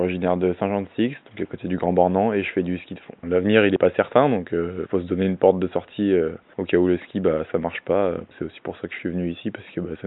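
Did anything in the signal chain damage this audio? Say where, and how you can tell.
No, no faults detected.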